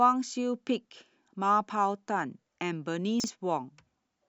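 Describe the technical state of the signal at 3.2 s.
A brief jumbled stutter from 3.2 to 3.28 s: chunks out of order, one 40 ms chunk arriving a chunk late, leaving three hard joins.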